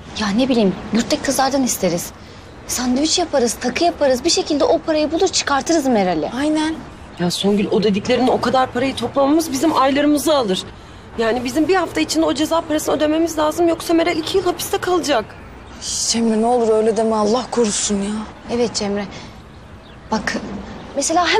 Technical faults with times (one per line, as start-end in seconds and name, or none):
none